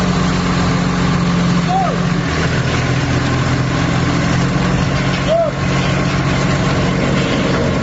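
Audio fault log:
throughout, gain pumping: gain swings about 5 dB under loud sounds, likely fast limiting of excess gain; waveform flattened, spectrogram floor breathing.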